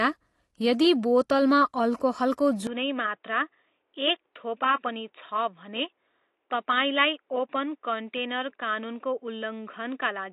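From the start the speech carries plainly audible AAC compression artefacts: a dull, smeared top end with a watery, fizzy edge on sibilants. The spectrogram shows a hard ceiling at 12.1 kHz. This likely comes from AAC-LC at a low bitrate, around 32 kbps.

At 2.67 s, right after "बोतलमा अल्कोहलको", the input switched to a poorer device with no gap. The sound turns boxy and narrow to the end. On the spectrogram the content now stops at 3.8 kHz, the waveform drops about 5 dB, and a faint new noise floor appears far below the speech. This is likely a change of microphone or profile.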